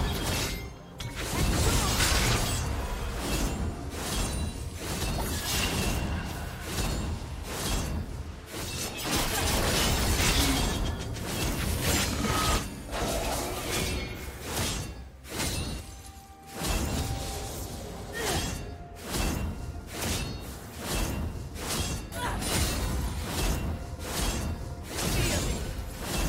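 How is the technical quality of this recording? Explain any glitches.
The recording has one glitch: a short dropout of compressed frames at 6.71 s. At that point a few whole frames of the compressed stream were either missing or rejected by the decoder as corrupt. Playback jumps forward by about a tenth of a second, which fits a frame length of 23.2 ms.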